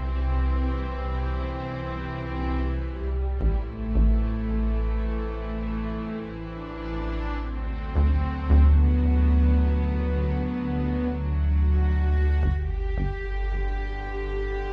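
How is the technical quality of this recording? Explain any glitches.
No glitches or faults are audible in this recording.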